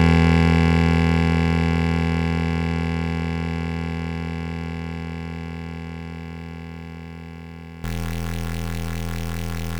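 A likely stuck bit, from a broken data line or converter, affects this music clip from 7.84 s to the end. Around half the samples jump by that bit's weight, roughly -20 dBFS, giving harsh, buzzy distortion and filling quiet moments with noise.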